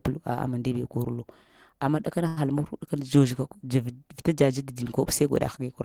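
At 2.27 s a packet arrives late, and the receiver's jitter buffer runs dry. Rather than skip ahead, the receiver stretches the last piece of speech for about 92 ms until the packet turns up at 2.39 s, then resumes from the same point. That makes it a short stall from a late packet. Nothing is lost, but one sound is held unnaturally long with a faint buzz or dip, and everything after it runs about 92 ms later.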